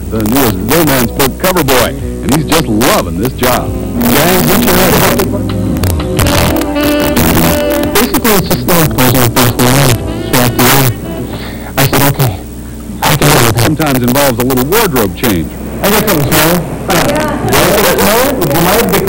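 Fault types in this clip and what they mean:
Integer overflow: a gain stage pushes the signal about 3 dB past the largest value its integer format can hold, and instead of being limited, the excess wraps around to the opposite sign. Each peak that crosses the limit jumps across the full range, so throughout the clip the loudest moments, a small fraction of the waveform, burst into violent cracks that are far sharper and harsher than ordinary clipping, while quieter passages stay intact.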